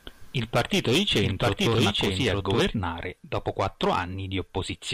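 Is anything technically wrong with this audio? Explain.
Yes, there's a doubled audio track from the start to 2.6 s: a second, equally loud copy trails about a second behind, likely from a duplicate capture path, then cuts off abruptly.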